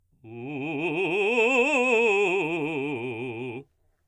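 No technical faults are audible.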